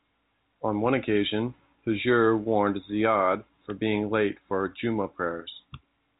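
No technical faults turn up in the speech, which carries the narrow band of G.711 telephone coding, with nothing audible above about 3.8 kHz and at most a faint, level-following grain from that format's logarithmic 8-bit scale.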